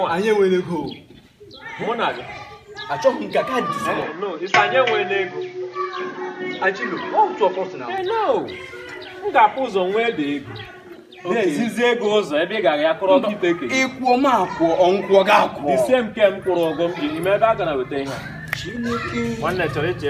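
From 4.02 to 7.98 s, an input switched to a poorer device is the likely cause. Everything above 7 kHz vanishes and a faint new background noise appears, well beneath the sound. Level stays roughly unchanged, with no gap, before full clarity returns.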